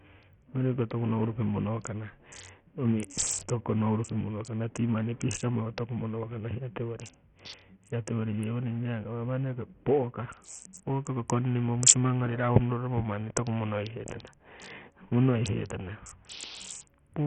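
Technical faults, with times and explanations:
Throughout, Bluetooth SBC compression is the likely cause: the speech sounds gritty and coarse, with treble that flickers and nothing above 16.8 kHz. The heavy damage fits a starved bitrate near 48 kbps, where upper sub-bands lose their bits and quantisation noise and aliasing intrude.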